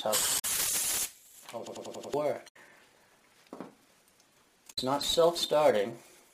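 A short glitch at 0.35 to 0.45 s comes from damaged data in a compressed stream: corrupted bytes left the decoder unable to read those frames, so it lost sync and jumped to the next valid frame header. From 1.67 to 2.14 s a machine-gun stutter repeats one 93 ms slice five times at about 10.8 Hz. This is a system hang loop. The system froze while the sound hardware kept replaying a ring buffer whose length fits 4096 samples, and roughly half a second of audio is lost. The same corruption returns at 2.44 to 2.57 s and at 4.69 to 4.78 s.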